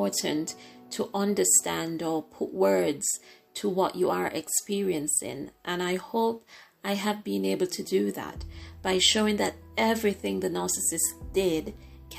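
No technical faults can be heard in this recording.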